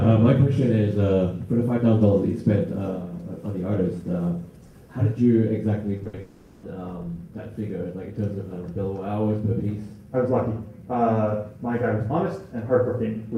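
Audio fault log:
5.97–6.19 s, repeated packet loss (robotic sound): four short holes follow one another, the longest 60 ms. About half of this stretch is patched by repeating the last sound. It turns choppy, with pieces missing.
6.21–6.65 s, long network dropout: sound stops arriving for 420 ms and none is heard. The final fragment carries on as a fading buzz, never falling to silence. This is likely a network outage. Audio then resumes with that part lost.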